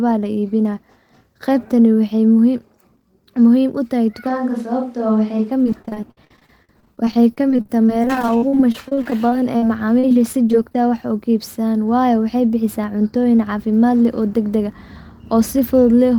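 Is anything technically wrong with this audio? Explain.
Yes, there are two problems.

From 4.30 to 5.50 s the speech turns suddenly roomy and hollow, with thinner bass and a faint bed of room noise sitting well below the voice, though the overall level barely changes. Then it snaps back. The likely cause is a switch to a distant microphone: the close mic's signal dropped out, so this stretch was picked up by a microphone farther away, which hears more of the room.

From 5.64 to 9.63 s, and again from 9.99 to 10.75 s, the speech turns choppy, with small pieces missing. This is repeated packet loss. The audio arrives with dozens of short holes in the first stretch and several in the second, the longest about 55 ms and 39 ms. Each hole is filled by stretching the preceding sound, which covers roughly a fifth of each span.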